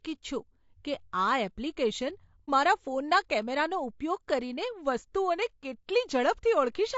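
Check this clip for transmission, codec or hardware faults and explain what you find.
Two faults are audible in this speech clip.

Throughout, the speech sounds rough and grainy, with noise filling the gaps between harmonics and a thin, synthetic top band. This is likely low-delay AAC compression, as in AAC-ELD. Its short frames resolve pitch harmonics poorly, and the damage fits a low rate of around 32 kbps.

From 2.45 to 2.50 s, an AAC frame loss with muting leaves a brief dip. The decoder zeroed the missing spectrum, and the overlapping windows fade the sound out and back in. The gap is soft-edged.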